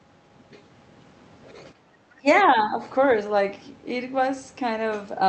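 A speech recording carried over a call link whose audio tops out near 8 kHz, consistent with a wideband Opus stream. From 1.74 to 1.89 s the room background is gated by the echo canceller: while far-end audio plays, the canceller pulls the microphone down by about 11 dB for 150 ms, so the ambience dips abruptly and then recovers. Between 2.17 and 2.45 s the talker's own speech drops by roughly 20 dB in pieces totalling around 150 ms, most likely speech suppressed in double talk, where the canceller, unable to separate near-end speech from loudspeaker echo, attenuates both.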